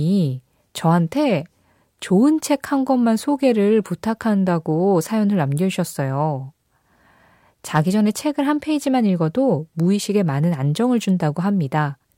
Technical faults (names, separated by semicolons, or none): none